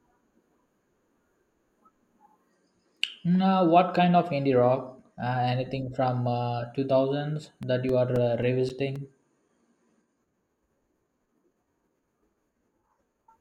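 From 7.63 to 10.02 s a run of ten short ticks, about four a second, cuts into the speech, the longest about 7 ms. These are CD scratch ticks: a surface blemish passes the laser once per revolution, corrupting more data than error correction can recover, so the player interpolates or mutes those samples.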